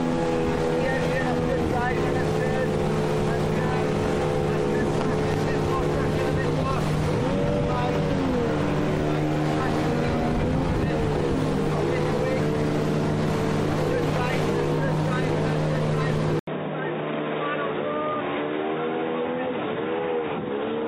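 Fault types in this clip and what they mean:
Input switched to a poorer device: at 16.39 s the sound drops out for 80 ms, then comes back duller and boxier, with nothing above 3.8 kHz, a new noise floor about 40 dB down, and roughly 5 dB lower level. Most likely the recording jumped to another microphone or a headset.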